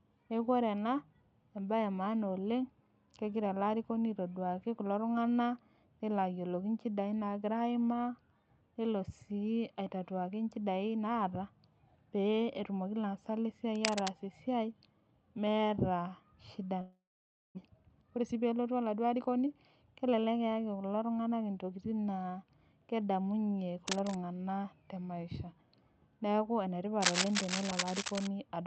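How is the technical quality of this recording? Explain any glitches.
The recording has clear glitches: scratching noise in three places, one long gap, and a stretch that runs too fast right after it. The speech comes through a call codec, and its top end stops at about 8 kHz.

Cable scratch noise appears at 13.75 to 14.09 s, just after "peetumoki laasak", then at 23.87 to 24.16 s, and again at 27.00 to 28.27 s. Dense, uneven rustling sits on top of the speech. It is about as loud as the speech in the first and last bursts, and about 5 dB quieter in the middle one. The likely cause is a worn cable or connector being moved. Its contact resistance then jumps around quickly and injects bursts of noise.

A long network dropout runs from 16.81 to 17.59 s. The audio likely stopped arriving for a while. The receiver filled about 0.75 s in total. It first stretched the last sound into a fading buzz, then left about 0.53 s of near silence. 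About 0.4 s of real speech was never played. When the sound returns, that piece is simply missing.

Jitter buffer speed-up follows from 17.66 to 19.47 s. After the gap, the buffer held roughly 0.3 s more audio than it wanted. To shed that delay, the receiver cut out many short pitch-period slices in a row. The speech plays at about 118 percent speed but keeps its pitch. It sounds hurried until the buffer settles.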